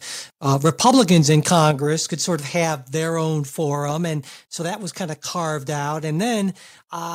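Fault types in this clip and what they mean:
Microphone overload: From 0.65 to 1.71 s, ending just before "could sort of", the loudest peaks are squared off with a harsh crackle, overshooting the converter's limit by about 4 dB on around 2 percent of samples. The likely cause is microphone input gain set too high for the converter.
Microphone volume stepped down: Everything, background included, drops abruptly in two steps: about 5 dB at 1.71 s, straight after the distorted stretch, then about 3 dB at 2.73 s, between "could sort of" and "their own". This is likely call software cutting the microphone's input gain.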